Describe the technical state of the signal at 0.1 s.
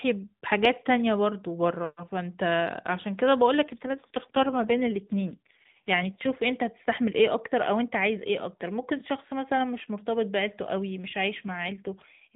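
At 0.1 s the signal is intact, with no fault present at that moment.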